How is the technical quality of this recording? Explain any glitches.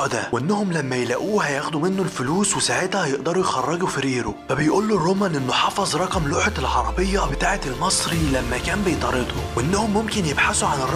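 The recording has one technical fault, present throughout: computer activity noise, a buzzing pulsing at roughly 150 Hz about 25 dB below the signal, caused by processor or graphics load disturbing the shared ground. It rises and falls with machine activity, not with the sound, unlike steady mains hum.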